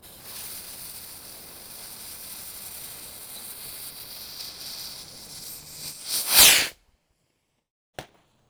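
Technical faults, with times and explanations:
Throughout, block size mismatch (truncated): the tail of each block, which fits 512-sample writes, is discarded, so the sound runs 1.6 times fast at near-normal pitch with a 150 Hz buzz. The waveform shows a jump every 6.7 ms; the spectrogram, stripes at 150 Hz multiples.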